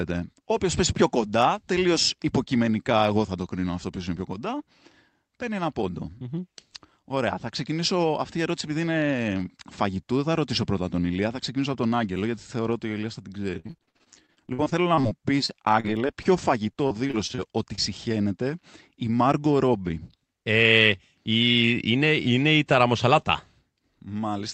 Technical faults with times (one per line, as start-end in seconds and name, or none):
13.59-16.27 repeated packet loss (robotic sound)
16.73-17.39 repeated packet loss (robotic sound)
17.75-17.80 short concealed packet loss